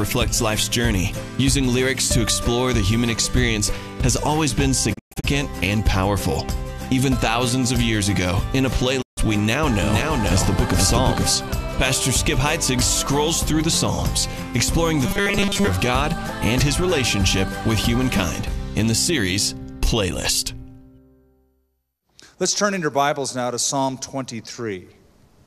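The audio has three kinds of fault. The first is a digital broadcast dropout, heard twice. From 4.93 to 5.25 s the sound breaks into several short holes with 20 ms fades. About 190 ms goes missing, and the longest gap is 120 ms. At 9.01 s it cuts again for 144 ms, fading back at 9.19 s. The receiver lost valid frames and muted until good ones returned. The hole sizes fit frames of about 24 ms. Whatever was sent during the muting is gone. Next comes a doubled audio track from 9.83 to 11.35 s. A second full-band copy trails the original by about half a second, at about 5 dB lower. It has no reverb tail or room colour. It starts and stops abruptly. The likely cause is a slower second capture path or an edit leaving two copies out of step. Last, from 15.06 to 15.67 s, the sound turns into robotic sound from repeated short buffers. It becomes a rigid metallic buzz at 200 Hz that loosely tracks the underlying audio. 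A steady 200 Hz pitch fits a 5 ms chunk being looped. Most of the real audio in that stretch is skipped. The likely cause is new audio arriving too seldom, so the software repeats the last buffer.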